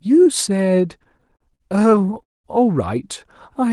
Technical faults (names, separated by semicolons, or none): repeated stalls (stutter); call audio freeze